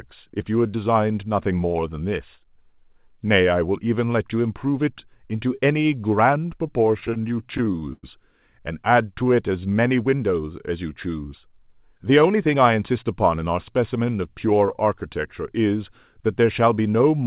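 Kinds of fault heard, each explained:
Repeated stalls (stutter): from 7.0 to 8.05 s, late packets emptied the buffer 13 times; held sound fills gaps up to 100 ms, visible as smeared, repeated spectrogram slices.
Jitter buffer slow-down: from 9.23 to 9.98 s, repeated pitch periods add 103 ms, so speech plays at 87% speed, showing as stretched, cloned waveform cycles at unchanged pitch.
Jitter buffer speed-up: from 11.92 to 13.03 s, about a tenth of a second of pitch periods is cut, so speech runs at 109% speed, showing as compressed syllables on the spectrogram.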